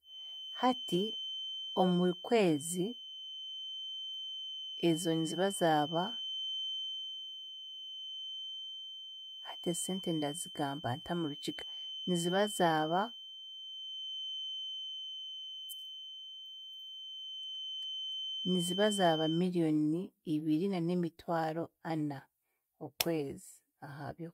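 The clip is speech with a feedback whistle: a thin, steady tone at 3.1 kHz sits behind the sound from 0.0 s to 19.47 s, roughly 10 dB below the speech and swelling and fading slowly in level. This is likely a loudspeaker-to-microphone loop held just at the edge of oscillation, so that a single frequency keeps ringing without building into a runaway howl. The tone then stops, and no whistle is present after 19.47 s.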